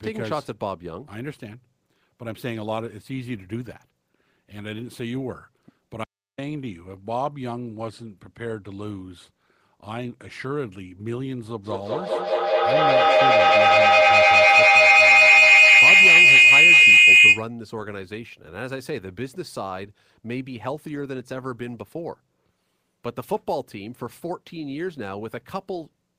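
A speech recording carries two separate faults. At 6.04 s the sound is cut by an audio dropout to silence lasting about 0.34 s, to 6.38 s. Speech stops mid-flow and resumes with no room tone in the gap, so the waveform shows a flat, near-silent line and the spectrogram a clean vertical blank band across all frequencies. The likely cause is a lost input, such as a disconnected device, failed link or brief mute, while the recorder kept writing silence. Whatever was said there is gone. From 11.64 s to 17.53 s a feedback howl builds. A microphone-to-loudspeaker loop gains level on each pass, narrowing to a shrill tone around 3 kHz that peaks about 16 dB above the speech and pulses roughly every fifth of a second. On a spectrogram it appears as a bright, thickening horizontal line near 3 kHz with regular beating, and the waveform swells into a dense, rising envelope until the loop breaks.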